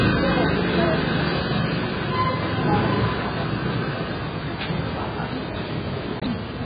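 From start to finish the sound is dull and band-limited, with nothing above 4.9 kHz, and carries a heavy smeared, warbling texture. This points to likely AAC compression at a very low bitrate, consistent with about 12 kbps, where the encoder lowers its cut-off and starves the remaining bands.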